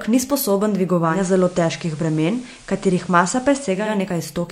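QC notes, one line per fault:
1.02–3.98 s digital radio blending to analogue: a 0.26 s cross-fade to FM, hiss roughly 30 dB down, level unchanged.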